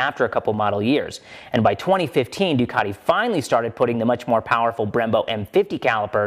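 No technical faults are audible.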